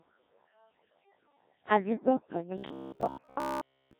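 From the start, the speech sounds robotic and buzzy: the heavy smearing of the Codec 2 vocoder, resynthesised from pitch and envelope at a very low rate, around 1.3 kbit/s. From 2.58 to 3.99 s it hardens into a rigid metallic buzz near 67 Hz, likely robotic sound from repeated short buffers, with roughly 15 ms slices looping over most of that stretch.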